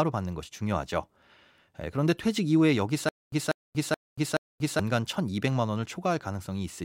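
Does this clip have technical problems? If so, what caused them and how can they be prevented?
Yes, from 3.09 to 4.79 s there's a stutter with silent gaps: a 192 ms fragment of speech repeats four times, each followed by 235 ms of dead silence. That's likely a stalled stream replaying its last buffer. Bigger playback buffering or steadier network delivery would prevent it.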